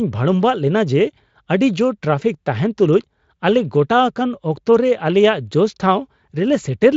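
No technical faults can be heard in this speech clip. It has passed through the Speex codec, whose traces are faint at most, and the sound has nothing above about 7.6 kHz.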